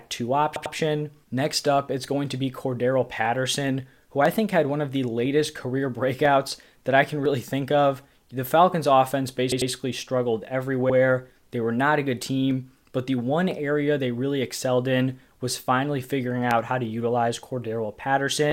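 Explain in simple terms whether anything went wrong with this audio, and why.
The speech stutters in three places, as if a tiny piece briefly skips back and plays again: at 0.56 to 0.75 seconds, at 9.52 to 9.71 seconds, and more briefly at 10.90 to 10.96 seconds. These are repeated frames. The audio is stored in small compressed chunks, and a few of them were saved or sent more than once, so the player played that fraction of a second over again. Each of the first two stutters adds about 0.19 seconds, and the last adds about 0.06 seconds.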